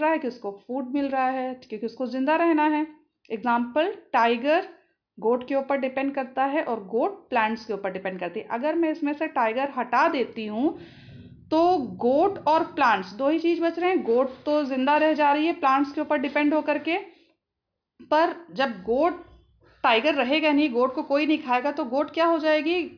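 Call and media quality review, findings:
No audible faults found: signal level and continuity hold steady throughout, with no dropouts, discontinuities or distortion detected in playback.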